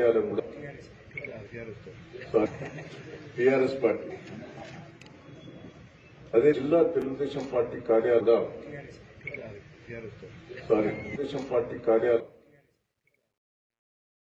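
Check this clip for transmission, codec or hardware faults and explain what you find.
Two faults here. Compressed frames skipped at 0.38, 1.45, 2.45, 4.09, 6.52, 8.19, 11.14 and 12.19 s: whole 26.1 ms frames drop out, so the audio jumps ahead by a few hundred milliseconds each time. Truncation distortion on a fade runs from 12.08 s to the end: the fade-out's level is kept at only 12 bits with no dither, so the tail turns gritty, worst from about 12.9 s.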